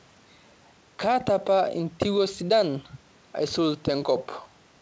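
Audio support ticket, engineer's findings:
Findings: no fault found; room noise sits about 36 dB below the speech, and the call path's G.722 coding, with nothing above 8 kHz, is as expected.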